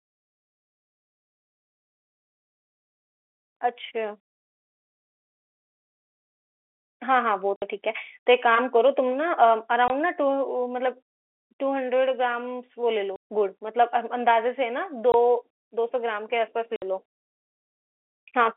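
Packet loss filled with silence cuts hard-edged holes at 7.56–7.62, 9.88–9.90, 13.16–13.23, 15.12–15.14 and 16.76–16.82 s. Their lengths fit multiples of 20 ms packets, unlike random dropouts. The line band is narrowed by G.711 telephone coding.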